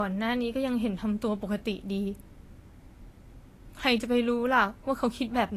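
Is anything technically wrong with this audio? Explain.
Yes. Throughout the speech, nothing is present above about 14.2 kHz, and the top end has the thin, smeared quality of a heavily compressed file, though the file itself is at a generous bitrate. This is likely low-bitrate audio saved at a high bitrate. The sound points to an earlier Vorbis encode at around 35 kbit/s, later re-encoded as MP3 at around 190 kbit/s. The second, larger encode cannot restore what the first discarded, so the cut-off and the first codec's artefacts remain.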